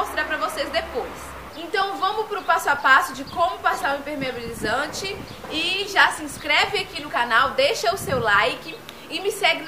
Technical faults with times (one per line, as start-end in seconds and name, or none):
1.82-8.10 clock drift buffer slips